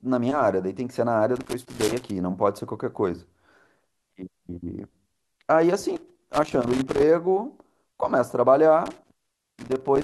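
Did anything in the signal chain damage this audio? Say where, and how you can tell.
Yes. Irregular bursts of crackle and scratching break through the speech from 1.36 to 2.11 s, 5.96 to 7.08 s, and 8.86 s to the end. This is loose connector crackle in the analogue wiring: a worn contact chops the signal as it makes and breaks.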